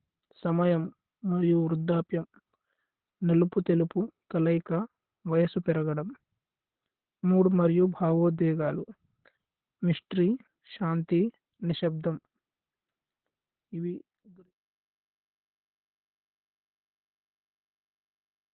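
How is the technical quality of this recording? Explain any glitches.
Technical quality is poor because of heavy codec damage. Opus voice compression runs throughout: nothing remains above 4.2 kHz, and coarse excitation coding leaves speech hoarse and slightly robotic, not merely dull as plain filtering would. The smooth fade-out ending at 14.53 s is clean.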